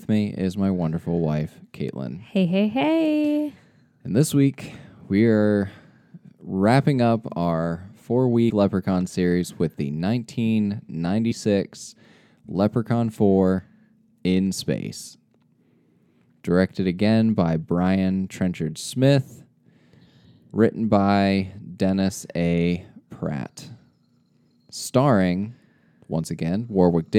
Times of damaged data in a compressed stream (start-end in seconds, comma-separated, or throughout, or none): 8.49, 11.31, 13.59, 25.53